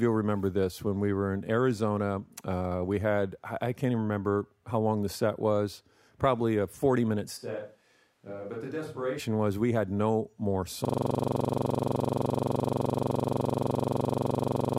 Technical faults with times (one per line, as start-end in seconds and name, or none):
7.39-9.18 switch to a distant microphone
10.85-14.78 system hang loop